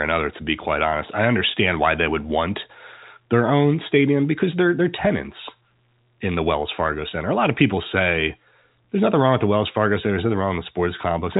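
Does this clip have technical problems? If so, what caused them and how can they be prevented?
No, the speech has no technical problems. It carries the narrow sound of G.711 telephone coding, with nothing above about 3.8 kHz, which fits an ordinary 64 kbps A-law phone line.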